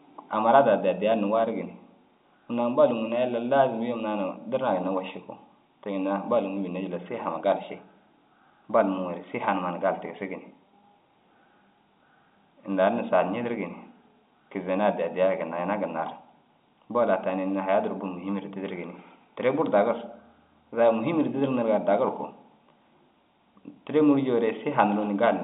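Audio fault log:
No faults heard anywhere in this speech recording.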